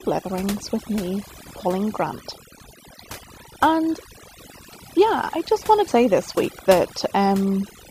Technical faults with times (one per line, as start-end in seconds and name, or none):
0.00-7.91 overdone noise removal
2.60 dropped buffer (overrun)
5.88 dropped buffer (overrun)